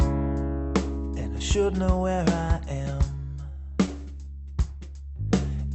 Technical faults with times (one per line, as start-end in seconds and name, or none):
3.53-4.42 repeated stalls (stutter)